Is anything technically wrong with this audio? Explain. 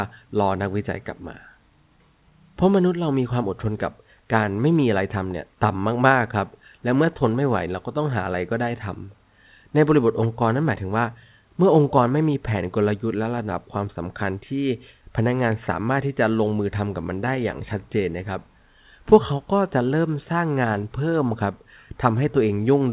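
No, nothing stood out as technically wrong when listening to this speech, which carries the narrow, telephone-band sound of A-law G.711 coding.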